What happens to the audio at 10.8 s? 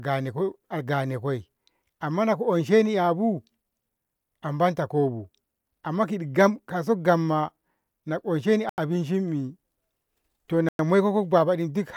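A Bluetooth stall runs from 10.69 to 10.79 s: the speech drops to about 105 ms of silence, then resumes. The cause is likely radio interference delaying packets, so the headphones' buffer emptied and playback paused until retransmitted data arrived.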